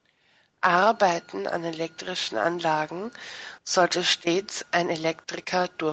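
Speech carried over a call chain, its top end stopping at 8 kHz, as the call microphone processing and the Opus-coded WebRTC call path would leave it, with no technical faults present.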